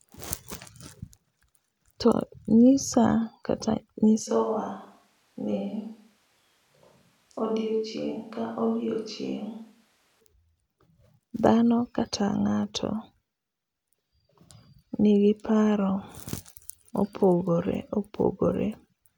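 From 4.29 s to 10.19 s the close microphone's feed drops out and the recording likely falls back on a switch to a distant microphone, such as one on the camera. The speech suddenly turns roomy and hollow, losing its low-end body and dropping by roughly 5 dB, while room noise rises to sit only some 35 dB under the voice. At 10.19 s the close, fuller sound returns just as abruptly.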